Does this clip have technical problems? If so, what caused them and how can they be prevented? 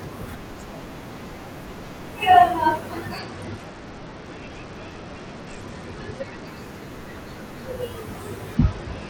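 Yes. A Bluetooth SBC bit pool drop dulls the speech from 3.19 to 6.47 s and again from 8.55 s to the end, with treble dulling and gritty noise rising. That fits the encoder's bit pool falling from 28 to 9 (about 78 kbps) on a congested link. On a spectrogram, energy in the top bands thins out in both spans. Keeping the phone close with a clear line of sight and reducing 2.4 GHz interference prevents this.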